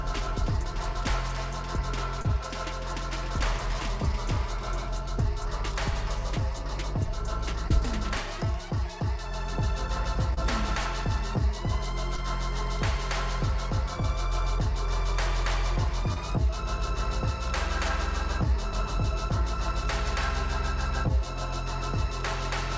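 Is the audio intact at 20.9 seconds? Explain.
Yes, the audio is intact at 20.9 seconds, with only the ordinary band limit of the G.722 call path, which leaves nothing above 8 kHz.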